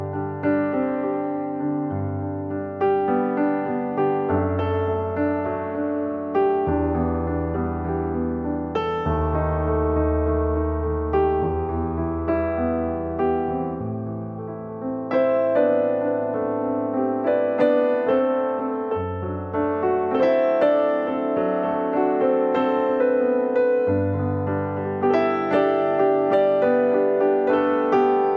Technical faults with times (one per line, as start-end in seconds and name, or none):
none